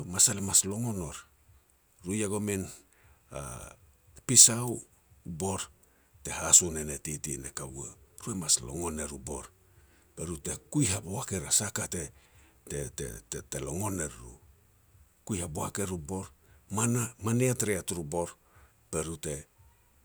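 No technical faults can be heard anywhere in this speech recording.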